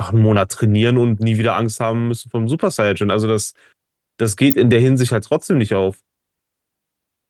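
A sharp snap lands on top of the speech from 4.51 to 4.53 s, a brief burst of about 22 ms that sits over the voice rather than replacing it. It is an electrical switching spike: a switch, motor or static discharge close to the recording chain likely threw off a short arc, and the audio line picked up that electrical jolt and laid it over the signal as a tight, clicky transient.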